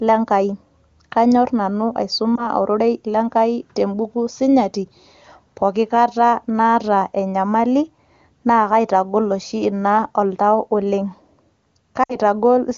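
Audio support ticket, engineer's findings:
Lost AMR speech frames. 2.36–2.47 s: brief dip or warble; waveform envelope sags then recovers; spectrogram harmonics smear flat. Fits one lost 20 ms frame; decoder reused last pitch and vocal tract settings at falling gain. 12.04–12.16 s: longer gap, dropping to near silence within two frames, weak or rough re-entry; repeated harmonic stripes, decaying amplitude. Fits about three lost frames (60 ms) on the AMR-WB 23.85 kbit/s link.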